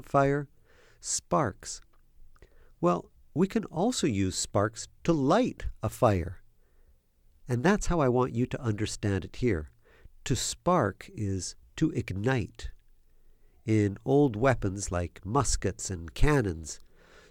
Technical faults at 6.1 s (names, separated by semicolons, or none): none